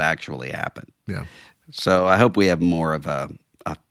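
A lost packet rebuilt from error correction runs from 1.95 to 2.09 s, just before "I hope we have". Packets went missing in transit, but each following packet carried a low-bitrate backup copy, and the Opus decoder played those copies instead of leaving a hole. The sound keeps flowing with no gap, but for about 80 ms, which fits four 20 ms packets, it turns rougher and noisier than the surrounding speech.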